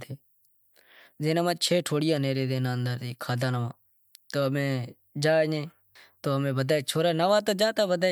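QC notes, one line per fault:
No faults detected in review.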